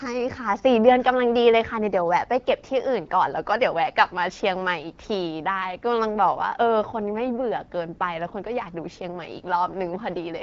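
No technical faults can be heard anywhere in this speech.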